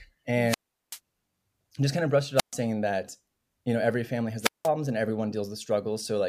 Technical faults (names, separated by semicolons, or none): wireless microphone squelch dropout